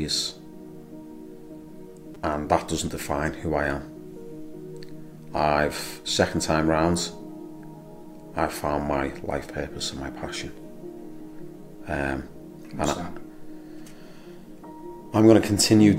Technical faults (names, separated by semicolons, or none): repeated buffer